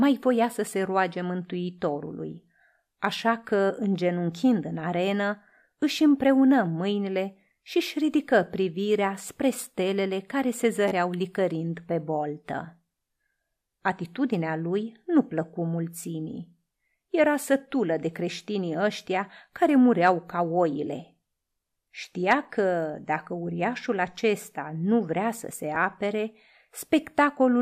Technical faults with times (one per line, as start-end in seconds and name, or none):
10.88-10.91 repeated buffer
25.75 repeated buffer